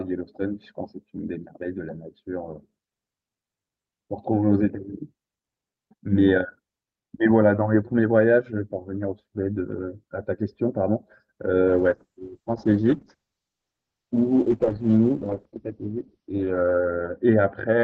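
At 11.69 s a call bitrate drop sets in and lasts to the end of the clip. The call's bandwidth estimate fell, so the encoder had to work with far fewer bits. The sound fits a fall from about 64 kbps to about 8 kbps. The top of the spectrum is cut from 20 kHz to 6 kHz. The speech turns muffled and rough. It stays at its worst for about 5.1 s and never recovers before the clip ends.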